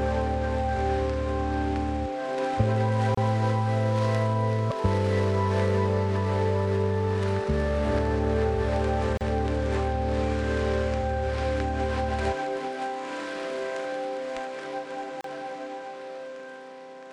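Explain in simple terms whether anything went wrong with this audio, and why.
Something did go wrong: three short silences break up otherwise continuous sound, at 3.15 to 3.17 s, 9.17 to 9.21 s and 15.21 to 15.24 s, each about 30 to 35 ms long. This is a gap at a join of encoded pieces. The audio was compressed in separate chunks and glued together without trimming the bit of silence each chunk carries at its edges. Unlike a dropout, nothing is lost: the sound picks up exactly where it paused, and the gaps come at a steady 6-second spacing.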